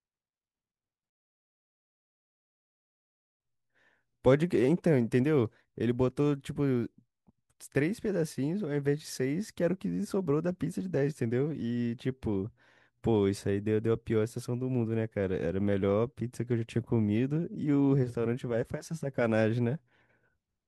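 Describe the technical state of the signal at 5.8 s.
At 5.8 s the speech signal is intact, with no audible dropout, distortion, clipping or other technical fault.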